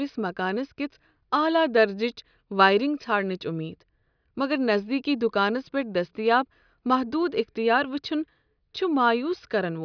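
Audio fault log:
Nothing to log here; the speech comes through without a single technical hiccup worth noting.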